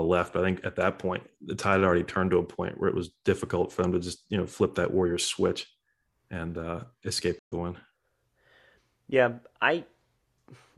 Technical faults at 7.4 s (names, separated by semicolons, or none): AAC frame loss with muting